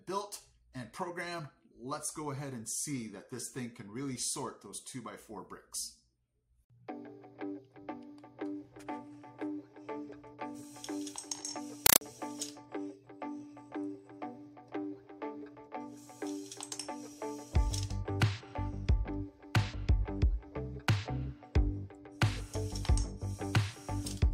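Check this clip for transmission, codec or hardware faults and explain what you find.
One fault: from 11.86 to 12.01 s the sound is replaced by a burst of very loud, harsh, chattering static. It is a compressed stream played as audio. Encoded data was sent to the output as if it were ordinary samples and was never decoded. Each data frame comes out as a 5.33 ms spray of noise followed by silent padding, repeating at about 31 times a second, which fits an AC-3 stream at 256 kbps.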